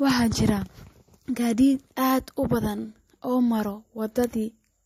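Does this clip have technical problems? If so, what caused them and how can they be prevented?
Yes. Throughout the speech, the high end stops sharply at 16.1 kHz, and the sound carries two overlaid layers of coding artefacts: one from MP3 and one from HE-AAC. That combination is most likely transcoding between lossy codecs. The artefacts fit an MP3 encode at around 48 kbit/s later re-encoded as HE-AAC at a similar rate. The second encoder spends its limited bits reproducing the first one's errors and adds its own, and the lowest band limit in the chain remains. To prevent this, keep a lossless master and encode to the delivery format only once, directly from that source.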